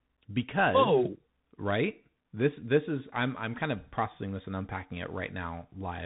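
Throughout, the speech passes through a Bluetooth CVSD headset codec, consistent with a 64 kbps link, so nothing above 3.8 kHz survives; sibilants turn scratchy over granular hiss.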